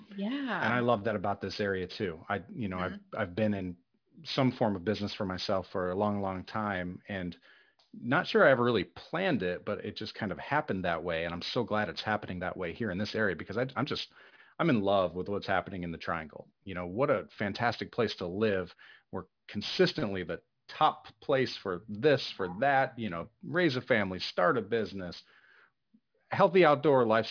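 Aliasing runs through the whole clip. The speech was resampled downward without an anti-alias filter, which fits a new rate near 11 kHz. Energy above 5.5 kHz folds back below it. Sibilants sound gritty and metallic. The folded energy sits about 20 dB under the speech.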